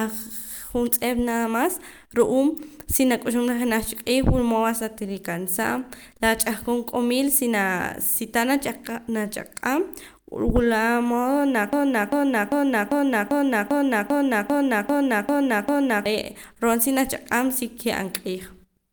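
At 11.73 s the speech falls into a broken-record loop that runs until 16.06 s. A fragment of about 0.40 s repeats exactly, back to back, 11 times, giving a rigid, stuttering cycle at roughly two and a half repeats per second. The likely cause is a stall in the player, encoder or stream, which kept resending the last fragment it held. Whatever speech belonged in those four-odd seconds is missing when normal playback resumes.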